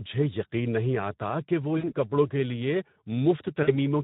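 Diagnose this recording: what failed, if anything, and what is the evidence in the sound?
At the codec stage, low-rate Speex encoding, consistent with roughly 11 kbps, starves the excitation, leaving the speech plainly hoarse and noisy throughout.

At the network stage, VoIP packet loss is concealed by the speech codec: about 60 ms lost at 1.77–1.93 s, between "نہیں آتا کہ وہ" and "کے لیے", and about 40 ms at 3.63–3.74 s. The decoder extrapolates from its last pitch and filter with fading gain, and the voice recovers slowly.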